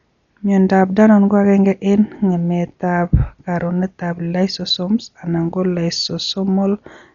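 Throughout the clip, a coder working at a very low rate is likely behind the damage, with Dolby Digital compression at a level that fits roughly 40 kbps. Starved of bits, the encoder cuts the band so that nothing remains above 7 kHz, and it leaves many frequency lines empty for the decoder to fill with noise. The speech therefore sounds heavily muffled and dull, with a rough, fluttering grain clinging to the voiced sounds.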